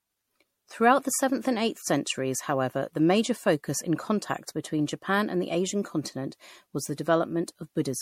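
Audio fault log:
throughout generation loss: swirly, hollow, smeared speech with blurred attacks and nothing above 16.5 kHz, likely from about five rounds of MP3 re-encoding, fitting 64 kbit/s.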